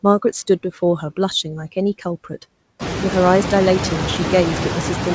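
Noise suppressor artifacts are present throughout. The suppressor pulls steady noise down by about 12 dB frame by frame, so the background sinks between words and rises back underneath them. The effect becomes more exposed once the room noise climbs around 3 s. Nothing is heard above 8 kHz, which fits a wideband call codec.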